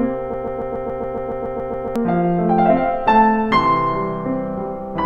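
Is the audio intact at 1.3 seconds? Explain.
No. At 1.3 seconds the music is caught in a broken-record loop running from about 0.34 to 1.96 s. A 140 ms fragment repeats exactly, back to back, twelve times. This likely comes from a stalled player or stream resending its last fragment. The music meant for that span is lost.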